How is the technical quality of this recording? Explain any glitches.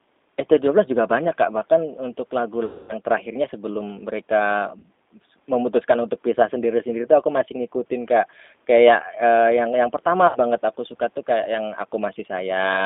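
The speech comes through, but it's been squeezed through a low-rate phone codec and has three dropouts.

The whole thing carries G.729 codec damage, plainly audible: a line band of roughly 250 Hz to 3.6 kHz, with a rough, slightly synthetic edge. That's what you get when the voice is rebuilt from a filter, pitch and a few pulses, which fits an 8 kbit/s G.729A stream.

Then there's VoIP packet loss concealed by the speech codec at 2.65–2.93 s, 4.79–4.86 s and 10.27–10.39 s, about 240 ms, 40 ms and 80 ms of missing audio. The decoder stretches its last pitch and filter into a fading buzzy tone or coloured noise, and the voice stays weak for a moment after the audio resumes.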